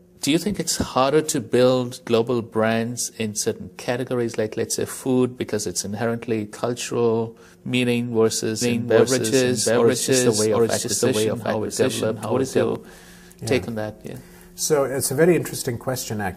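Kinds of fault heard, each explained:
Doubled audio track: The same audio was likely picked up a second time through a slower path and mixed back in, so a second full-band copy runs behind the first. From 8.62 s to 12.76 s, every sound repeats around 0.7 s later at about the original's level. The repeat carries no decay or room colour, and it appears and disappears abruptly at those two points.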